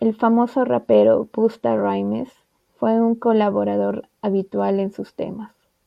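From 0.13 s to 5.85 s the speech carries clock slip clicks, a rapid run of roughly a hundred tiny ticks about every 50 ms that merges into a soft rattle. The likely cause is two unsynchronised clocks differing by around 400 ppm, dropping or repeating one sample at each slip.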